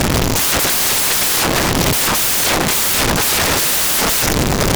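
Speech buried under loud white noise from start to finish: samples built from the wrong bytes, where the reader misassembles each sample so the rapidly changing low-order bits land in the high positions. Unlike ordinary broadband hiss, the noise tracks the signal.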